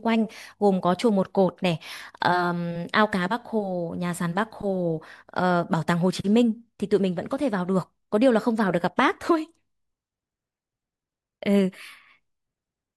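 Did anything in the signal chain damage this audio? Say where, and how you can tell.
No damage from the chain.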